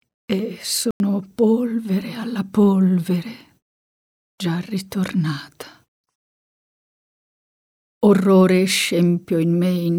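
At 0.91 s the sound cuts abruptly to silence, a corrupt frame muted. The decoder rejected damaged frames. The 96 ms gap, ending at 1.00 s, fits two lost frames.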